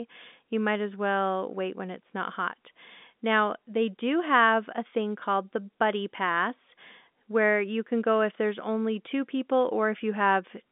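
No technical faults can be heard anywhere in this speech recording. It carries the narrow sound of G.711 telephone coding, with the line band running from about 200 Hz to 3.6 kHz, nothing above 3.8 kHz, and at most a faint trace of coding damage.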